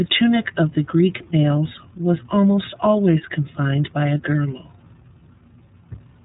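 iLBC codec coding runs throughout the speech, leaving it plainly rough and slightly synthetic. Each 30 ms frame's excitation is coded independently at a rate that fits 13.33 kbps. Nothing above 3.8 kHz survives, so the sound is narrowband, dull and band-limited.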